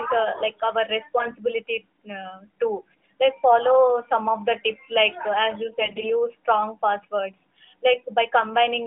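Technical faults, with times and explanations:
1.18 to 1.35 s, AMR bit errors: Right after "uh like our", the mobile link corrupted the weakly protected bits in about eight consecutive 20 ms frames, at an error rate of around 5 percent. The integrity check on the core bits still passed, so the decoder used the bad data, misplacing excitation pulses and skewing fine pitch, gain and spectral values. The sound keeps its rough pitch and level but turns briefly hoarse and scratchy.
5.80 to 6.11 s, AMR bit errors: Between "uh as you" and "strong passwords", a longer burst struck about thirteen frames at roughly double the earlier error rate, near 10 percent. The narrowband decoder again trusted the damaged values, so the scrambled excitation and spectral detail make the sound gargly and rasping for about a third of a second.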